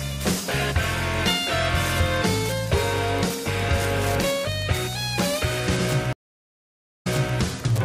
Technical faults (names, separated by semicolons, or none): Wi-Fi interference; stream reconnect